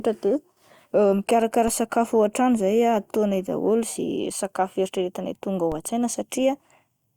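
At 1.68 s and again at 5.72 s, a DC step of about -22 dBFS shifts the speech waveform's zero line, giving a low thump that decays through a 20 Hz high-pass.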